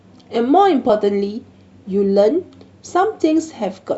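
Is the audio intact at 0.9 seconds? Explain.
No. At 0.9 s, compressed frames skipped: a frame went missing or was rejected by the decoder, so the speech jumps ahead about 20 ms, one frame's worth.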